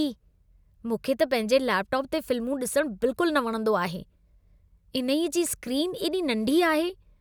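No technical faults can be heard in this recording.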